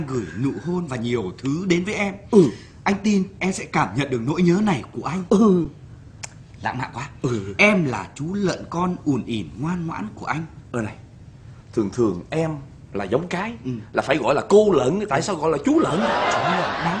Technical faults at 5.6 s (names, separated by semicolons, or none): underrun with held sample